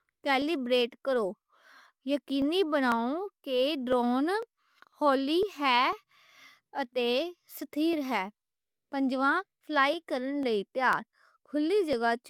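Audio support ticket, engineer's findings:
Periodic USB or driver dropouts: background task stalling USB bus or audio driver every 0.5 s, 0.42–11.93 s. Roughly half a millisecond skipped each time, around twenty losses. Heard as evenly spaced ticks, only while speech present.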